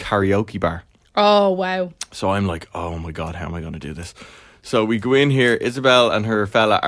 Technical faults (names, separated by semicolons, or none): none